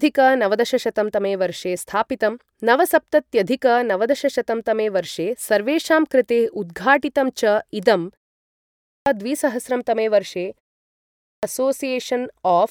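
Speech that twice restarts abruptly out of silence, its opening sounds missing: about 640 ms is lost from 8.42 to 9.06 s and about 600 ms from 10.83 to 11.43 s. Each is a clipped start after a pause, here pauses of about 0.3 s, because the output device dozes in silence and swallows the opening while it wakes.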